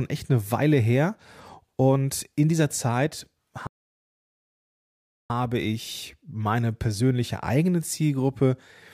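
It's a speech clip with a playback stall right in the middle: the sound cuts out mid-flow at 3.67 s and stays silent until 5.30 s, a gap of roughly 1.63 s. That's a dead drop to silence rather than a fade, which points to the player likely running dry of buffered data or having its playback thread blocked, so nothing reached the output until it caught up again.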